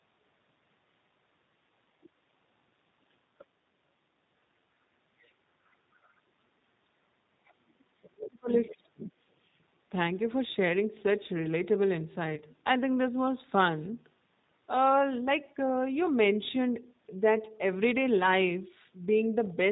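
Throughout the recording the speech carries plainly audible G.729 codec damage. At 8 kbit/s the codec rebuilds each 10 ms frame from a vocal tract filter, a pitch predictor and a handful of pulses. The result is intelligible but rough and slightly synthetic, with a hard ceiling at 4 kHz that removes sibilant detail and leaves the speech sounding boxed in.

Faint scraps of a second voice appear at 2.03–2.09 s, 3.38–3.45 s, 5.22–5.31 s, 5.94–6.12 s and 7.46–7.84 s. They sit well below the main talker, from roughly 25 dB down to around 40 dB down. This is likely the other side's voice leaking through: the far end played on a loudspeaker and was not fully removed by the echo canceller, so short residues pass into the microphone path.

From 8.02 to 9.11 s, about one second in total, the main talker dips sharply, by as much as roughly 40 dB at the deepest point. Over 8.63–9.09 s the leaked voice rises to its loudest, only about 20 dB below the speech. 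This is likely speech suppressed in double talk. With both sides active, the echo canceller could not tell its own talker from the returning echo and attenuated both.

At 12.35–12.41 s a brief dropout of about 20 ms, which fits a single lost packet, is covered by VoIP packet loss concealment in the speech codec. The decoder extends the last pitch and filter state, so the gap turns into a short, fading sound. Because each frame depends on the previous one, the speech stays weak and distorted until about 12.41 s, after the packets resume.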